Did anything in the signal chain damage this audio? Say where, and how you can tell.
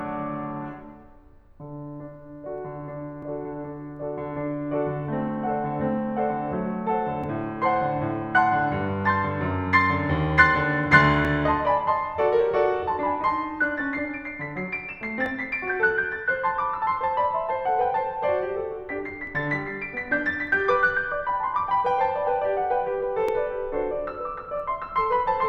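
Yes. The damage sits at the buffer or block-processing stage, as overlapping chunks. The music was handled in 4-second chunks, each starting about 12 ms before the previous one ended, so that sliver plays twice at every join. The result is a brief click or stutter at 3.23, 7.24, 11.25, 15.26, 19.27 and 23.29 s. A spectrogram shows thin broadband vertical lines at those times. On the waveform, each join shows a discontinuity followed by a repeated 12 ms stretch.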